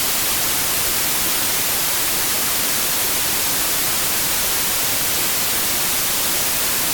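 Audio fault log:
Throughout: wrong sample width. The speech was stored as 32-bit integers but is read as packed 24-bit ones. Most samples mix bytes from neighbouring values, so loud noise buries the speech. It plays at 0.75 times speed, lowering its pitch.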